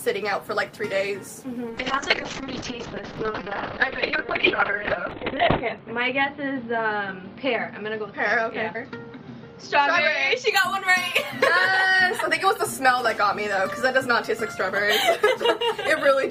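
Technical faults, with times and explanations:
1.7–10.57 s, call bitrate drop: the audio turns muffled and rough, with everything above 4 kHz gone and the worst coarseness lasting about 3.9 s. The encoder cut its bit budget sharply, consistent with a fall from roughly 32 to 6 kbps, so it dropped high frequencies and coded coarsely until the rate recovered.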